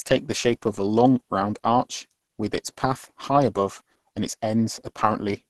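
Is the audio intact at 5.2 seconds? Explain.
No, at 5.2 seconds you're hearing Opus compression, which runs through the whole speech clip. It sounds muffled and hoarse, with grainy, noisy texture where detail should be. That likely comes from the encoder starving for bits and switching to its hybrid speech mode, pointing to roughly 16 kbps.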